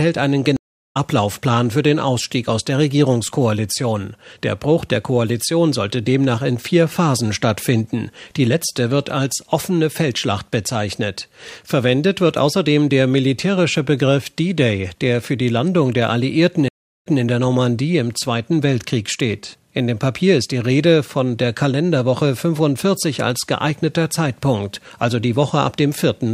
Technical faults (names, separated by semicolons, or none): stream reconnect